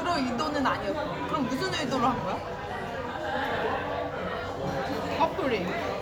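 No technical faults are audible in this sound recording at any point.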